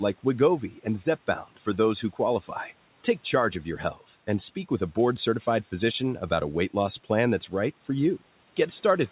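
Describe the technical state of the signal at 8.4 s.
At 8.4 s the speech is intact, with no dropout, glitch or distortion, only the room noise about 27 dB below the voice and the normal 4 kHz band limit of the G.711 call path.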